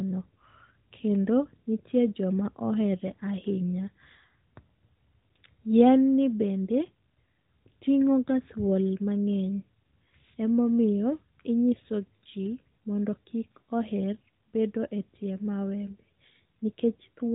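Nothing stood out as a fault on listening to this speech clip.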